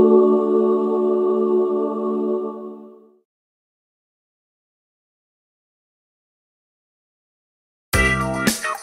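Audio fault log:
No audible faults found.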